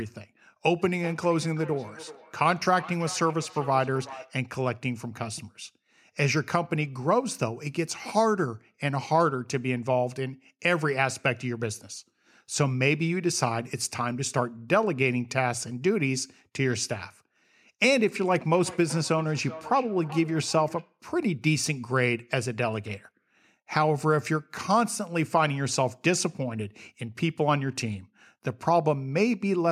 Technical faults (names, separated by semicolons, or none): feedback echo between two devices